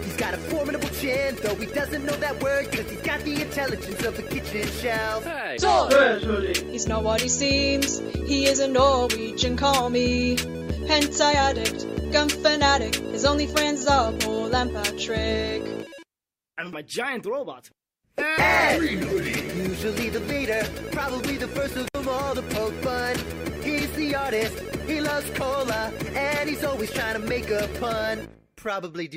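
At 21.85 to 21.95 s an intermittent contact briefly breaks the signal: a loose plug or cable opens for about 63 ms. The crackle at both edges and faint hiss inside the gap set it apart from a clean digital dropout, which falls to silence.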